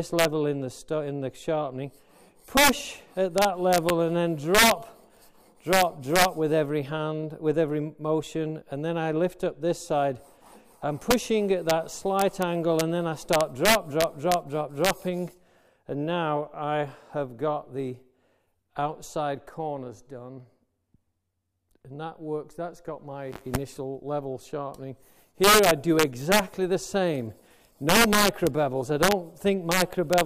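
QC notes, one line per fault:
Throughout: integer overflow. The level sits about 7 dB past the integer limit, so the loudest peaks exceed the largest value the format can hold. Instead of being clamped, those samples wrap around to the opposite sign and jump across the full range. Only a small fraction of samples, well under one percent, are affected. They are heard as violent, sharp cracks on loud moments, far harsher than ordinary clipping.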